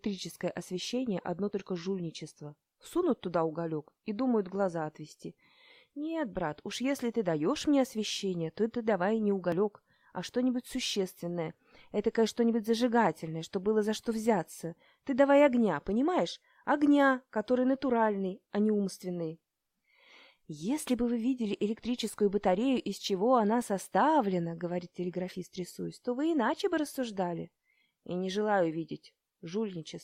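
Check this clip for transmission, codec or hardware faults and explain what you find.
Three brief skips from overlap between stream segments occur at 1.53, 9.52 and 17.51 s. Overlapping segment timestamps make the player discard 6 to 12 ms of real audio, leaving a waveform jump and a vertical broadband line on the spectrogram, heard as a tiny skip.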